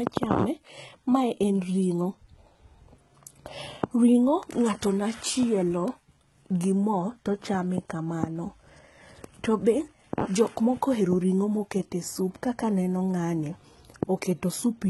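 Throughout the speech, s sounds are gritty and lispy with a metallic sheen, likely from heavy HE-AAC compression at a rate fitting about 16 kbps, which rebuilds the treble from copied lower bands. A spectrogram shows blocky, repeated upper texture cut off sharply at 11.8 kHz.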